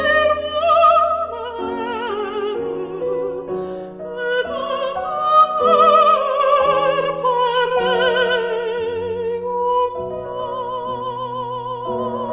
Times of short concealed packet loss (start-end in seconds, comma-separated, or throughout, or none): none